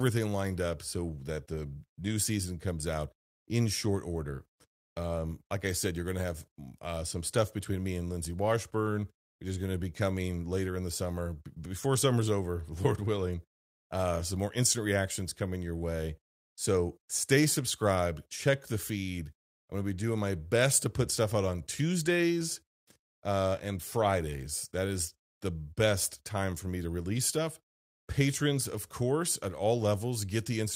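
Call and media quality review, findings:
No faults found in the speech signal: level, continuity and timing hold steady throughout, with nothing audible to attribute to any component in the capture, transport or playback path.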